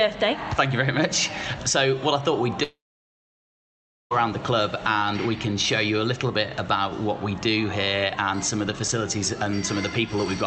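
From 2.63 to 4.13 s the last sound trails off into about 1.35 s of silence. Audio then resumes with about 1.48 s skipped, which points to a likely long network dropout rather than a delay, since that part never returns.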